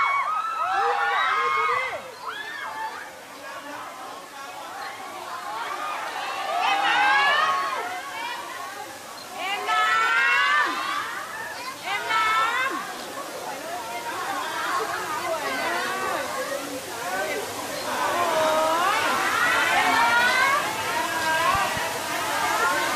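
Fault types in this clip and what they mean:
Loud pop: two sharp pops between 21.55 and 21.79 s, a few dB above the surrounding sound, which carries on underneath. They are likely a voltage step from a plug, switch or static. They appear as tall waveform spikes and thin full-height spectrogram lines.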